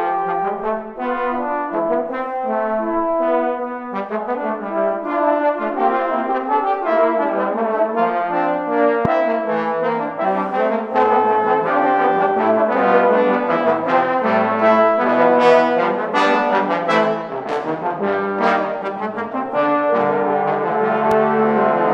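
A sudden voltage pulse, likely from a plug, switch, static discharge or driver glitch, gets added to the signal twice, producing a loud pop at 9.05–9.08 s and another at 21.11–21.14 s. Each is a single sharp pop, roughly 15 dB and 10 dB above the audio, with the sound continuing underneath.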